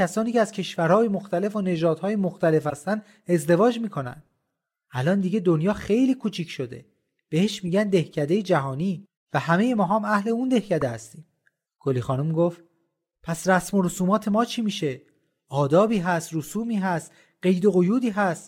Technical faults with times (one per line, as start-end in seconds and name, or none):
2.69-2.73 corrupt frame decoded
7.67 corrupt frame decoded
10.81 corrupt frame decoded